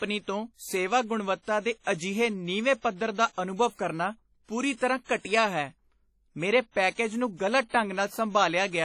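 Speech with a ringing, washy sound and hiss that breathes with the signal. Nothing is heard above 18.9 kHz. This is likely heavy WMA compression, fitting a low bitrate near 32 kbps. Pre-echo appears at 1.84 to 1.87 s and 6.95 to 6.98 s. A short hiss precedes each sharp attack by 25 to 27 ms, softening it. The block's quantisation noise spills into the quiet moment before the onset.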